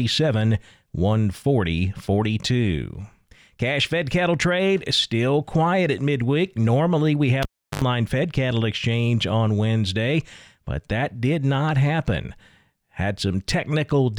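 At 7.43 s the speech cuts out with a pop: a cable pulled and plugged in. About 342 ms of near silence follows, then roughly 69 ms of 50 Hz mains buzz as the plug tip makes contact, and a second pop at 7.82 s when the signal returns.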